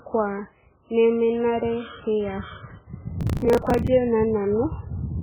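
Throughout, the speech is dull and watery, with nothing above 3.6 kHz, most likely from heavy MP3 compression at a bitrate as low as 8 kbps. On a spectrogram the treble is cut flat at that line, and the weak components below it flicker on and off in patches.

From 3.21 to 3.88 s, just after "nemenare pias", a gritty processor overload crackle tears through the sound. Dozens of short buffers, each around 5 ms, were skipped, leaving hard-edged gaps. The waveform shows jagged breaks, and the spectrogram shows vertical clicks.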